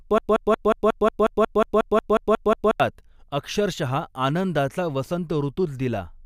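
Speech with a broken-record loop already under way at 0 s: a 0.18 s fragment repeats 14 times until 2.80 s, likely from a stalled stream resending its last buffer, so that speech is lost.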